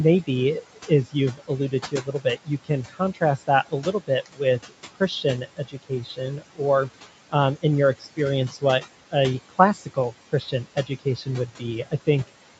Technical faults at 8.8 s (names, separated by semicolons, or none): noise suppressor artifacts; speech cut by the noise suppressor